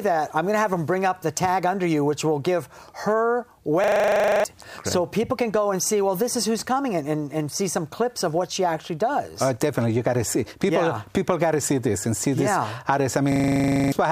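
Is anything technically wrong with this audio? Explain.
Yes. A system hang loop occurs at 3.84–4.44 s and again at 13.32–13.92 s. The system stalled while the hardware kept replaying one 40 ms buffer, so a fragment repeats 15 times at 25 Hz. It sounds like a rapid stutter and drops well over half a second of audio.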